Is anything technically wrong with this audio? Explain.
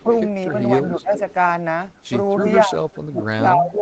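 Yes. A delayed copy of the speech leaks back at 0.0–0.17 s, 1.12–1.34 s, 2.44–2.53 s and 2.91–2.98 s, each lagging about 258 ms. That's likely echo leak, where the far end's canceller let loudspeaker pickup through. It's faint at the start and near 2.9 s, about 35 and 30 dB down, but louder, about 15 dB down, around 1.2 and 2.5 s.

The speech also dips at 0.02–0.09 s, 0.97–1.15 s and from 2.66 s to the end, by roughly 10, 15 and 20 dB. It sounds like speech suppressed in double talk, likely the canceller ducking this talker while both sides overlapped. The audio tops out around 8 kHz, which fits the call path's bandwidth.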